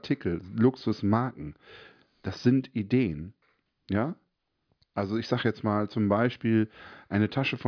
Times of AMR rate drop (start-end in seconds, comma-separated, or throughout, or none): none